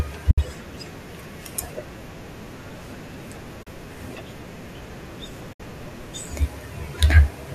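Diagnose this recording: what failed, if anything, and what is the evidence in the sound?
AAC frame loss with muting at 0.31, 3.63 and 5.53 s: network loss left soft-edged 70, 40 and 70 ms holes where the likely low-delay AAC decoder zeroed missing frames.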